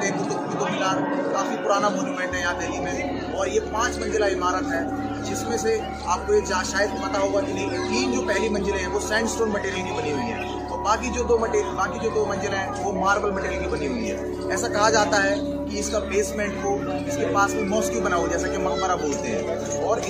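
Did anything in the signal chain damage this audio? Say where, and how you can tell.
No, nothing along the chain seems to have left a mark on this one, so there's no damaged stage to point to.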